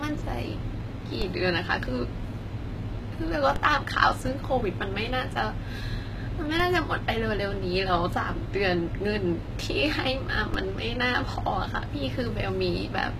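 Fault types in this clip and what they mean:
HE-AAC compression: The treble sounds rebuilt instead of captured, with gritty, lispy s sounds and a metallic edge, and nothing above 14.9 kHz. That's likely HE-AAC copying lower bands upward to fake the top end, and the damage is loud enough to suggest a bitrate around 20 kbps.
DC step: The waveform's zero line suddenly jumps, heard as a low thump at 1.22, 3.56, 6.6 and 10.54 s while the speech carries on. Each offset then fades away the way a 20 Hz high-pass would bleed it off.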